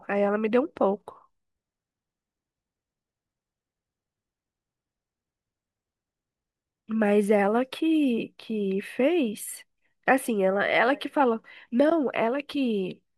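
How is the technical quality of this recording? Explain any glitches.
The technical quality is good, with no glitches to explain.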